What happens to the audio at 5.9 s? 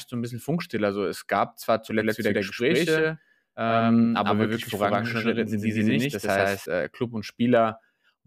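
At 5.9 s the speech carries a doubled audio track, from 2.00 to 6.66 s. An equally loud copy trails by roughly a tenth of a second, likely from a second, slower capture path.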